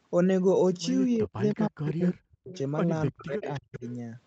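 Speech suppressed in double talk, 1.17 to 2.52 s: the voice drops out in pieces, about a second in total, falling as much as around 40 dB. An echo canceller that couldn't separate the near talker from returning loudspeaker echo likely turned both down together.

Echo leak at 1.5 s, 1.85 to 2.11 s, and 2.52 s: copies of the voice arrive 313 ms late. The copy is very quiet at 1.5 s and clearest around 1.9 s, only about 15 dB under the voice. A loudspeaker-side canceller likely failed to strip everything its microphone picked up.

Speech suppressed in double talk returns from 3.11 to 3.85 s, with about half a second of dips reaching around 35 dB. This is likely the same canceller clamping down while both sides are active.

Echo leak, 3.44 to 3.94 s: the 313 ms delayed copy comes back for a longer stretch, about 20 dB below the voice. This is likely the same incomplete cancellation at the loudspeaker end.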